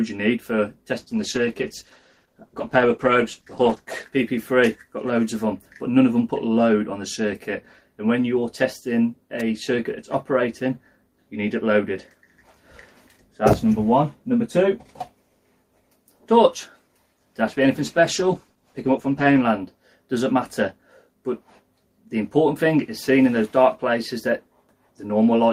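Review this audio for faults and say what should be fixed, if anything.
A call bitrate drop muffles and roughens the sound from 1.0 to 4.15 s and again from 17.49 to 19.49 s. The encoder's bitrate fell, consistent with about 32 dropping to 13–14 kbps, so it coded coarsely and cut the high frequencies. A spectrogram shows the upper band abruptly missing. Prevent it by giving the call a more stable connection or more bandwidth headroom.

An electrical switching spike is heard as a sharp snap or a tight cluster of clicks at 9.40 s and 13.53 s. It is likely caused by a nearby switch or static discharge arcing into the audio line. Each appears as a thin vertical spike on the waveform and a full-band vertical line on the spectrogram. Prevent it by moving cables away from switching equipment and using shielded, grounded lines.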